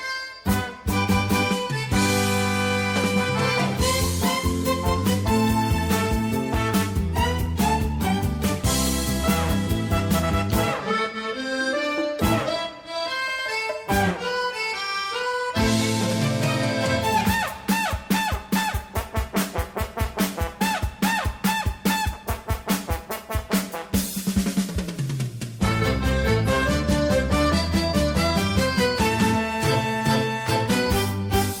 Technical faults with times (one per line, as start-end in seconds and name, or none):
none